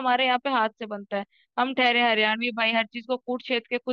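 No technical faults can be heard anywhere here.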